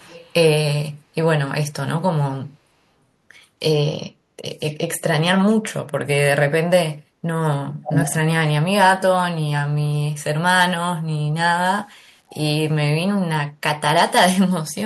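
Echo leak appears three times, at 0.0 to 0.34 s, 7.73 to 8.15 s and 12.28 to 12.35 s. Each time a copy of the speech returns 352 ms late, faint at the start, as loud as the speech itself around 7.7 to 8.2 s, and barely audible near 12.3 s. The likely cause is a far-end loudspeaker feeding its microphone while the echo canceller failed to remove all of that pickup, so the leftover was sent back down the line.

Low bit depth without dither follows at 11.39 to 12.89 s. The speech turns grainy and gritty, and the roughness rises and falls with the sound, sitting only a moderate distance below it. This points to a signal likely truncated to roughly 9 bits with no dither, so the rounding error tracks the waveform rather than forming a steady hiss, and the quietest passages break up or sputter.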